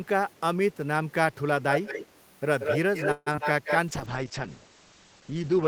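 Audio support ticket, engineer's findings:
Echo leak: faint delayed copy of the speech at 0.29–0.40 s and 0.72–0.77 s (250 ms lag, about 40 dB down), then loud at 1.72–2.20 s and 2.60–3.78 s (179 ms lag, about 5 dB down then level with speech). Likely far-end loudspeaker pickup escaping the echo canceller.

Call audio freeze: 3.11–3.28 s, sound stretches into a fading buzz ending in about 40 ms of silence, then resumes where it stopped. Likely jitter buffer underrun. 150 ms filled, nothing lost, playout delay grows by 150 ms.

Short concealed packet loss: brief smear or wobble at 3.32–3.45 s and 3.36–3.39 s. About 20 ms of audio missing each time, bridged by decoder concealment extrapolating the preceding sound (13 ms and 16 ms filled) before crossfading back to real audio.

Call bitrate drop: from 3.89 s to the end, speech turns muffled and rough. Encoder rate cut from 32 to 9 kbps after a falling bandwidth estimate, with Opus narrowing audio bandwidth from 20 kHz to 8 kHz. 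No recovery within the clip.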